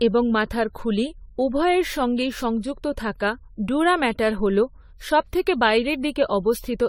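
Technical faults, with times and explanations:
Throughout, generation loss: speech sounds swirly, hollow, smeared with blurred onsets, likely from about ten AAC-LC passes near 64 kbit/s, compounding across shifting frame grids.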